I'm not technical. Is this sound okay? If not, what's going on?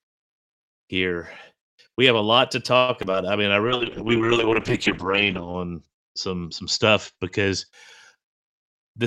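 No. From 2.77 to 3.15 s, just after "have a lot to", the voice turns choppy and robotic, with small pieces missing. This is repeated packet loss (robotic sound): bits of the call's audio never arrived, four times in quick succession. Each time, the system filled the hole by stretching the last sound it had, and the longest hole was about a tenth of a second. That patching is what gives it the robotic edge.

From 3.67 to 7.78 s, the voice sounds duller and rougher, a bit watery, as if heard through a thin wall, and it is at its worst for nearly two seconds of that stretch. This is a call bitrate drop: the connection seemed to weaken, so the call squeezed the voice into far less data. To save space it threw away the crisp high end above 8 kHz and coded the rest more coarsely, until the connection recovered.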